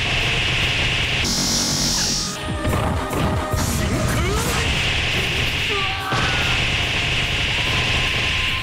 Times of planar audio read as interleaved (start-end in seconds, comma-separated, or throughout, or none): 1.25-2.36